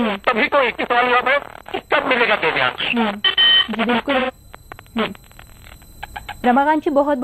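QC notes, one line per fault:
4.19–4.31 s AAC frame loss with concealment: 85 ms dropped, fitting two AAC frames, and the decoder patched the gap from the last good spectrum, leaving a smeared, noisy or phasey patch.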